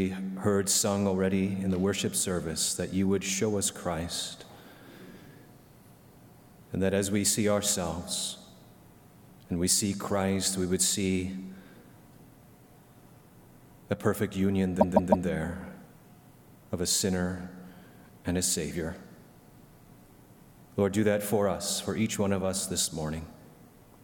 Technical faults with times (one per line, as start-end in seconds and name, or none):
14.80-15.27 repeated frames